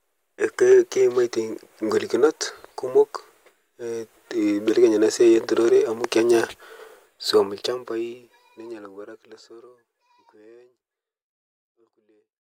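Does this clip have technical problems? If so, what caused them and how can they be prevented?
No, this speech clip has no technical problems; the gentle fade-out from around 7 s to 12.6 s is a deliberate edit, not a fault.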